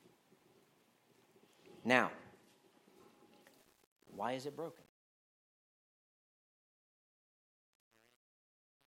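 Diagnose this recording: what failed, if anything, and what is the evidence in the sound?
A gain stage applying the fade-out requantised without dither, a sample-format conversion fault whose coarseness points to roughly 9-bit resolution. The result is truncation distortion on a fade: from 3.58 s the decaying sound turns grainy, and from 4.05 s to the end it is at its grittiest.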